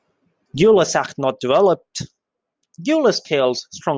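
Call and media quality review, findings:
No audible fault found in the speech clip. No component flagged for follow-up.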